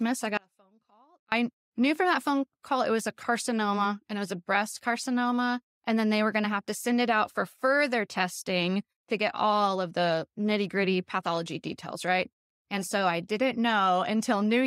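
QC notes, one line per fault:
0.37–1.32 s, audio dropout to a faint residue: speech cuts abruptly, leaving only a faint leak roughly 35 dB down, likely from brief signal loss on a live path.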